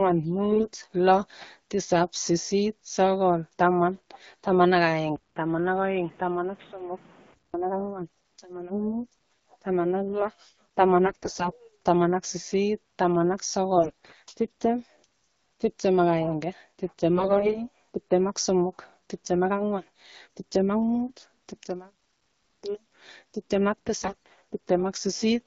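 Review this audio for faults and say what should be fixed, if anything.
AMR bit errors at 0.52–0.67 s, 3.94–3.97 s, 11.06–11.54 s, 13.76–14.12 s, 17.16–17.58 s and 24.01–24.13 s make the speech hoarse and gargly while pitch and level hold. Flipped low-priority bits misplace the excitation pulses and corrupt the fine gain and spectral parameters. Improving radio link quality or adding stronger channel coding would prevent this.

From 5.16 to 7.54 s the sound goes dull and boxy, with nothing above 3.8 kHz, a 200 ms silence at the changeover, a level drop of about 10 dB, and new background noise about 30 dB below the speech. This is likely an input switched to a poorer device. Locking the recording input so the system cannot change devices mid-session would prevent it.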